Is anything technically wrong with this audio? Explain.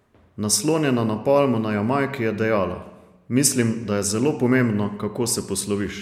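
No, nothing technically wrong can be heard in this speech recording. The audio runs without any audible disturbance or interruption.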